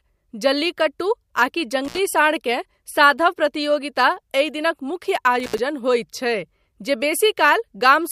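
At 1.85 s the speech drops out briefly. It is an intermittent contact fault: a loose plug or cable lead opens for a moment, then reconnects. The line stays open for about 70 ms. Crackle marks both edges of the gap, and faint hiss remains inside it. The event ends by 1.98 s. The same fault returns at 5.40 s. This time the gap lasts about 83 ms, again with crackle at each edge, and it clears by 5.59 s.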